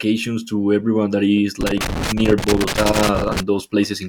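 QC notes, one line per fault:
1.61–3.40 s, loose connector crackle: just after "to everyone that is", a worn or dirty contact keeps making and breaking, chopping the speech into an irregular burst of crackle. On the waveform this shows as jagged dropouts and spikes; on the spectrogram, irregular broadband vertical streaks.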